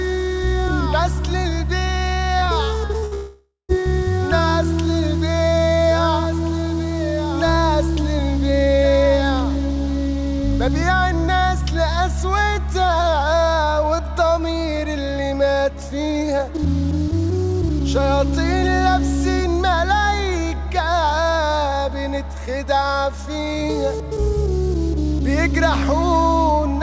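Brief smears break up the sound from 2.39 to 2.45 s and again from 2.45 to 2.50 s, back to back, then at 2.86 to 2.92 s and 2.98 to 3.05 s. Each is short concealed packet loss. About 30 ms of audio failed to reach the decoder in time, and the receiver bridged the hole by extending the preceding sound for roughly 30 to 40 ms before blending back into the real signal.

From 3.05 to 3.14 s the last sound is held and fades. This is a burst of packet loss, with about 60 ms missing in a row. The receiver kept the last sound going and turned it down across the gap. When playback resumes, the part in between is gone rather than delayed.

Right after, from 3.14 to 3.72 s, there is a longer stretch of continued sound that decays and then falls to silence for roughly the last 140 ms. This is most likely a long network dropout. Around half a second of audio never arrived, so the concealment carried on for about 540 ms until there was nothing left to extend. 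The sound then picks up further along without the lost portion, still limited to below 8 kHz by the G.722 call codec.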